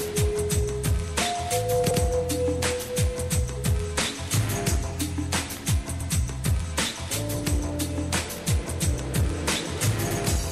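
At 6.01 s and again at 10.11 s there is a short stutter from overlapping chunks. Each 4-second chunk begins 100 ms before the previous one ended, so that slice plays twice at the join and is heard as a brief repeated fragment.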